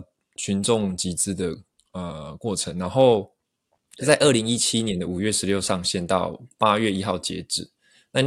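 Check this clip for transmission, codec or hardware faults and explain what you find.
There's one fault, and it's in the first part of the speech. From 0.0 to 5.79 s you get crude rate conversion: the audio was resampled using simple linear interpolation between samples, with no proper anti-aliasing filter. The pattern fits a 48 kHz to 44.1 kHz change. The interpolation error repeats on a cycle set by those two rates, so it adds tones unrelated to the speech, roughly 30 dB down. You hear it as a faint gritty, inharmonic fizz that rides on the louder, brighter moments.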